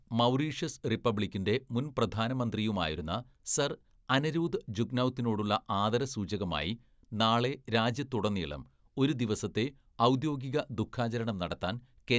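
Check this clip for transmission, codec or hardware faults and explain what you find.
Nothing to report: no faults are audible anywhere in the speech.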